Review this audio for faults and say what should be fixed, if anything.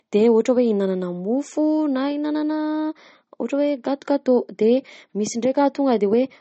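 Across the whole speech clip, nothing comes through above about 8.4 kHz, and the top end has that smeary, swirly quality of heavy MP3 compression. That points to low-bitrate audio saved at a high bitrate: the speech was likely squeezed through a very low-bitrate MP3 first, something around 32 kbit/s judging by the cut-off, then re-encoded as a much larger MP3. The bigger file can't bring back anything the first pass threw away. To fix it, go back to the original recording or a lossless copy and encode once, straight to the target bitrate.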